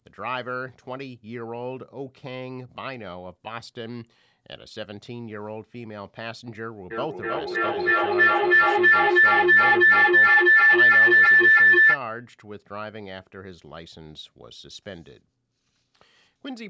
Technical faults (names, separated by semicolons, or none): feedback howl